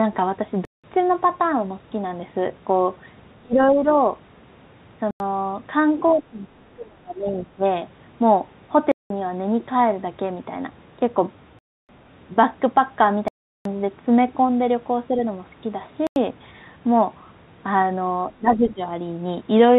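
At 0.65 to 0.84 s the playback side likely failed to fill its output buffer in time, and a block of digital silence replaced about 186 ms of speech, which fits a missed 8192-sample buffer. The audio drops straight to silence and returns with no fade, leaving a short hole. The narrowband G.711 mu-law call path has nothing above 4 kHz.

From 3.41 to 3.86 s both sides were talking, and the echo canceller, likely unable to tell this talker from the loudspeaker echo, turned everything down. The speech is suppressed in double talk, dipping by about 30 dB over roughly 300 ms.

Another digital-silence block follows at 5.11 to 5.20 s, a 93 ms gap consistent with a 4096-sample buffer. Suppression returns from 6.1 to 7.63 s, a drop of about 25 dB across roughly a second and a half.

Further zeroed blocks cut in at 8.92 to 9.10 s, 11.59 to 11.89 s and 13.28 to 13.65 s. That last gap is 372 ms, which fits a 16384-sample buffer, and each sounds like a hard-edged hole.

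A brief suppression at 15.08 to 15.18 s dips only about 5 dB. Then a 93 ms silence block lands at 16.07 to 16.16 s, and a final double-talk dip of about 15 dB runs from 18.38 to 18.81 s.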